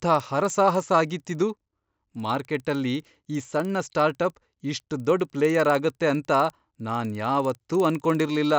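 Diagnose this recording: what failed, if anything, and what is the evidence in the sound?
A steady 20 Hz ticking, close to a low buzz, runs under the speech for the whole clip and stops in the pauses. This is a resampler restarted on every block, a fault in the sample-format conversion stage. Each 50 ms block was converted alone, probably upsampling 16 kHz to 48 kHz, leaving a small error at every block edge.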